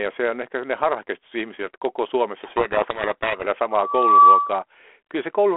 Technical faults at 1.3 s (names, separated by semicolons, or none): none